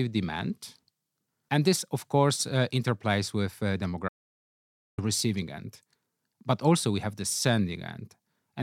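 From 4.09 to 4.98 s the speech drops out to silence, likely a lost input link, erasing about 0.89 s before "receiving end" resumes abruptly.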